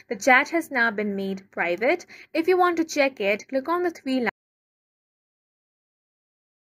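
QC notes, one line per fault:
4.30 s to end: audio dropout to silence. Sound cuts off mid-flow to total silence without room tone, likely because the input was lost while recording continued.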